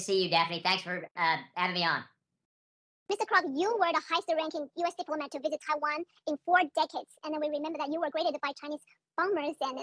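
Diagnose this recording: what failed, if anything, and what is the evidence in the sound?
Wrong sample rate, present throughout, is a playback-stage fault. Everything runs about 1.38 times too fast, and the pitch sits roughly 5.5 semitones high. Speed and pitch are shifted together by the same ratio, with no added artefacts. That points to samples clocked out faster than they were captured, with no rate conversion in between. A ratio of 1.38 fits audio recorded at 16 kHz being played at 22 kHz.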